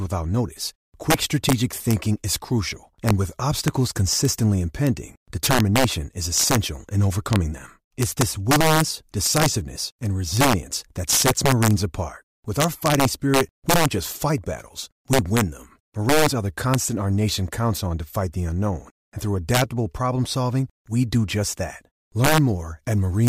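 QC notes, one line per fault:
throughout, integer overflow: the speech is driven about 6 dB past full scale, and a small fraction of samples, under one percent, wrap to the opposite sign instead of being limited, so each loud peak flips across the full range and produces violent cracks far harsher than clipping.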